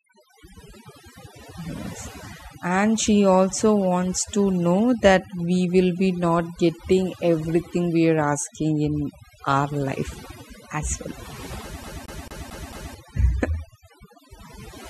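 From the start the speech carries overdone noise removal: bands near the noise floor are pulled down hard, taking quiet parts of the voice with them, so the background drops and breaks up into twinkling specks. From 11.84 to 12.94 s the CD is stuck on one turn: a 222 ms slice repeats five times, with a short mute at each jump back, giving the fast, even stutter of a skipping disc.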